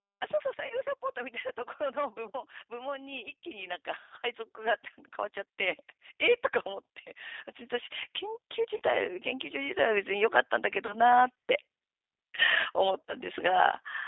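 From start to finish the speech carries G.729 codec damage, plainly audible as a rough, slightly synthetic edge. At 8 kbit/s the encoder rebuilds each short frame from a vocal-tract filter, a pitch predictor and a few pulses, discarding fine detail. The band runs only from 250 Hz to about 3.7 kHz, so a spectrogram shows a hard ceiling with nothing above it and smeared, blocky harmonics below.

VoIP packet loss concealed by the speech codec appears four times: 0.67 to 0.75 s, 8.77 to 8.81 s, 10.86 to 10.96 s and 13.06 to 13.14 s. Each gap covers 30 ms of missing audio, which fits one lost packet. The decoder extends its last pitch and filter with falling gain, so each moment turns into a brief stretched sound, a buzzy tone or coloured noise, that sags and stays weak or distorted until the frames rebuild. On a waveform, the envelope dips and flattens into regular periodic cycles. A spectrogram shows frozen, evenly spaced harmonic lines that fade.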